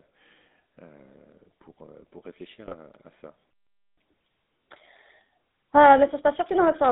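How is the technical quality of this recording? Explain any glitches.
The recording is band-limited and gritty throughout, with one short burst of digital corruption, a half-second dropout, and then a stretch that runs fast and high.

GSM full-rate codec (whole clip): The speech sounds buzzy and gravelly, with nothing below about 200 Hz or above about 3.7 kHz. The full-rate GSM coder rebuilds speech from a vocal-tract filter driven by thinned, regularly spaced pulses, and that sparse excitation is what produces the roughness.

GSM bit errors (2.66–2.75 s): Just after "pour pour réfléchir" and right before "à ça", the sound briefly squawks and gargles. Corrupted bits reached the decoder across a few frames, distorting the filter, pitch or gain values and twisting the spectrum for that instant.

Playback stall (3.51–3.97 s): After "pour réfléchir à ça" the audio cuts to silence for about 465 ms, then resumes. 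The player was likely starved of data or blocked, so it had nothing to output until it recovered.

Catch-up at higher speed (3.97–6.81 s): Right after the gap, the audio plays about 1.15 times too fast and roughly two semitones high, then settles back. The player resampled its backlog to recover the lost time, which raises speed and pitch together.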